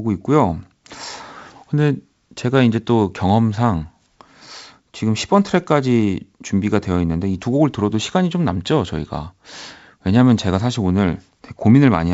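No faults are audible in this speech, which comes over a G.722 wideband path at 64 kbit/s with at most faint coding traces.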